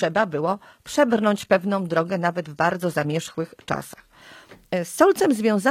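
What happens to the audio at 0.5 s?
At 0.5 s you're still inside the opening stretch of an adaptive stream starting at a low bitrate, which runs from the very start to 4.21 s. The player grabbed a cheap rendition to get going fast, so the top end is thin and partly synthesised, with smeary codec artefacts, which fits something like HE-AAC around 20 kbit/s. At 4.21 s it jumps cleanly to a fuller version, plausibly AAC-LC near 96 kbit/s, with no gap.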